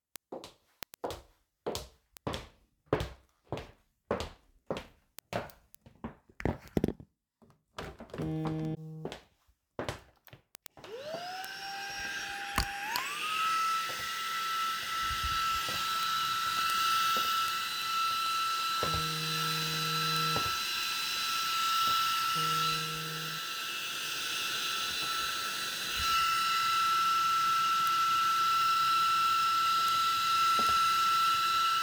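From 0.16 s to 31.78 s, word clock ticks recur about ten times a second, sharp and uneven in strength. A receiver running unlocked from its digital source drops or repeats a single sample at each slip, which fits a clock mismatch of roughly 200 ppm. The strict regular spacing separates this from random clicks or dropouts.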